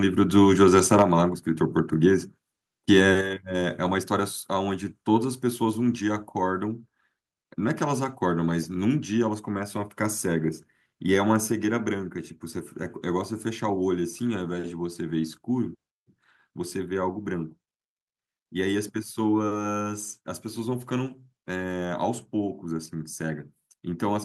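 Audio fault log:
0.38–1.03 s microphone overload: loudest peaks are flattened about 5 dB past full scale, likely input gain set too high, giving harsh crackle; waveform shows squared-off tops on under one percent of samples.
1.02 s and 3.21 s microphone volume stepped down: level drops abruptly by about 5 dB, then about 6 dB, likely automatic gain reduction; waveform envelope and spectrogram brightness step down sharply.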